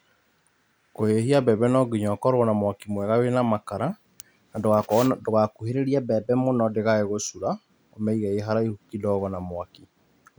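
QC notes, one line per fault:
5.69–6.75 s, drift correction step: clock-matching software likely stepped the playback rate up 5.7%, so speech runs fast and 96 cents sharp, then snaps back.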